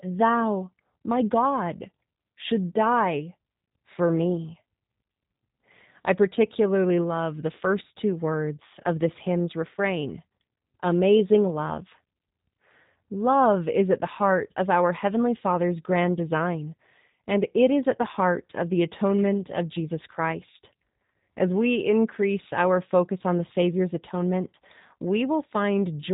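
Throughout, the speech has been squeezed through a G.729 codec, with a sound that fits the 8 kbit/s G.729A variant. It rebuilds each short frame from a vocal tract model, a pitch predictor and a few pulses, so the voice turns rough and synthetic, with nothing above 3.8 kHz.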